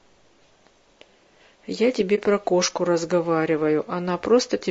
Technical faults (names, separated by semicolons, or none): low-delay AAC compression; AAC frame loss with muting